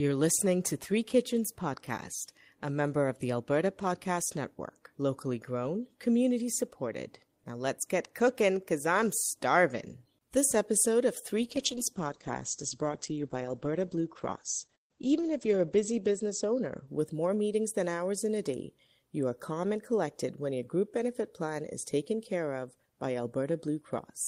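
From 11.45 s to 17.77 s the speech goes through a call bitrate drop. The call's bandwidth estimate fell, so the encoder was given far fewer bits, which fits a fall from about 32 kbps to about 11 kbps. At its worst, held for about 4.7 s, the audio is coded more coarsely and sounds rough and watery. Its high end is cut off at 8 kHz instead of reaching 20 kHz. Unlike packet loss, nothing drops out or stutters; the texture degrades continuously, then clears by 17.77 s.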